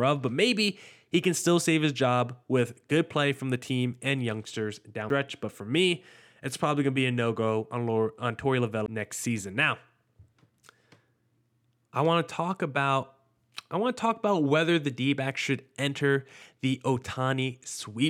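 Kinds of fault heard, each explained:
CD skip: The laser jumps off its track and lands on a different turn of the disc's spiral. The player mutes briefly, then carries on from that new spot. It happens twice here. At 5.09 s, just after "the team and youngsters", a gap of only a few milliseconds breaks the flow. At 8.86 s, just before "next season", a gap about twice as long, roughly 15 ms, does the same. Each time, the sound resumes from a displaced point.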